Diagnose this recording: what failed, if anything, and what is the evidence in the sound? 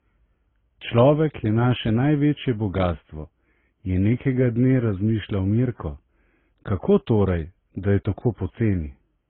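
The codec stage failed, likely through transcoding between lossy codecs, with each encoder in the chain adding its own damage to the last. Throughout the speech, nothing survives above 3.9 kHz, and different codec artefacts overlap, which fits a low-bitrate AAC, then MP3, then Opus chain.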